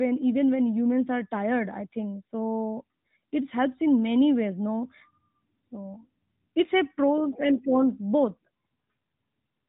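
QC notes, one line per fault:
No faults found in this speech clip.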